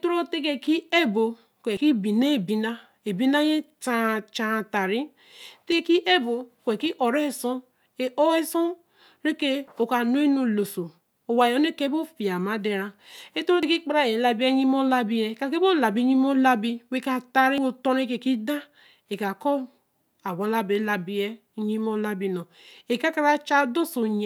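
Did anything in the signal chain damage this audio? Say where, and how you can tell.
Yes: audio missing between chunks, likely at the buffer stage. Every 4 s, at 1.77, 5.72, 9.68, 13.63 and 17.58 s, the speech skips about 50 ms, joined without silence.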